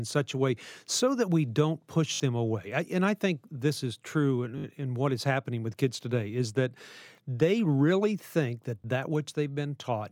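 At 2.14 to 2.2 s and again at 4.58 to 4.64 s you get a repeated buffer: audio arrived late, so one piece, which fits a 20 ms buffer, plays four times in a row. It's a quick buzzy stutter, and a bit under a tenth of a second goes missing. At 8.82 s there's a smaller click from a single repeat.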